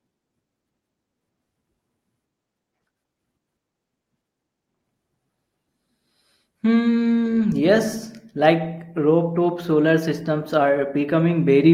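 No technical faults are audible.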